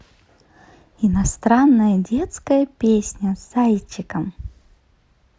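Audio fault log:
No faults heard.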